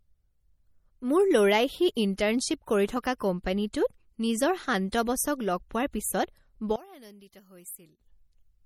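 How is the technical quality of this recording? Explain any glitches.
The recording has two problems: coding damage you can plainly hear throughout, and a stretch near the end where the speech nearly drops out.

MP3 compression runs through the whole clip and is likely the cause of the watery, swirly texture. When the encoder runs short of bits, it zeroes the weaker frequency lines, and those lines flicker on and off from frame to frame. That gives the sibilants a metallic chirp and smears the attacks. The damage fits a low bitrate of around 48 kbps, and nothing survives above 19.2 kHz.

From 6.76 to 8.00 s, the level falls by about 22 dB, background included, and then comes back. The likely cause is one channel inverted in a stereo source before it was folded to mono. Whatever both channels shared cancelled out in the sum, so all that's left is the small mismatch between them, sitting roughly 22 dB below the surrounding audio.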